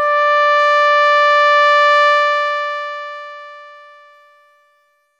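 A music clip with truncation distortion on its fade-out, which begins around 2 s: from 2.08 s the tail turns gritty, and from 3.85 to 5.2 s it is at its worst, which fits an undithered stage keeping about 11 bits. Unlike added noise, the grit follows the falling level.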